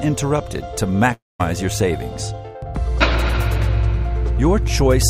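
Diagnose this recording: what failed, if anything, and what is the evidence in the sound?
The network stage likely failed, with a long network dropout from 1.13 to 1.41 s. The sound gives way to a synthetic continuation of its last moment, a buzz that fades, then about 200 ms of silence before the audio resumes, with roughly a quarter second of material simply gone. On a waveform the envelope decays into a flat line; a spectrogram shows a smeared, repetitive band thinning out to an empty gap, then an abrupt restart.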